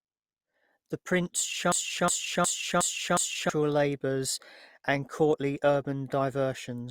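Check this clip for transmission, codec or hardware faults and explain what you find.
There's one fault in this speech clip. From 1.72 to 3.50 s, a broken-record loop stutters a 0.36 s snippet five times. It's likely a stalled stream resending its last chunk, and it eats the audio before "labours and courtly".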